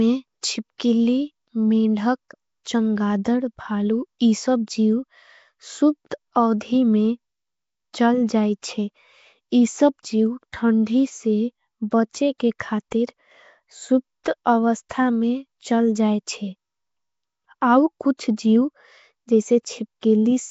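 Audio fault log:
Throughout, Nellymoser compression: the speech has a rough, hissy halo and a smeared, underwater feel, with nothing at all above 7.7 kHz. The likely culprit is Flash's old Nellymoser Asao codec at something like 32 kbps. It hands out a fixed, small bit budget per short block, so quiet bands get zero bits and are patched with noise. That substituted noise is the fizz you hear, and the coarse coding is what blurs everything.
14.24 and 20.01, pre-echo: at both spots a brief hiss creeps in just ahead of a sharp onset, about 19 ms early at the first and 15 ms at the second, and the attack itself lands soft and smudged. The codec spreads its quantisation noise across the whole block. When the block holds a hard hit near its end, noise sized for that loud moment also fills the quiet stretch before it, so the hiss arrives before the sound does.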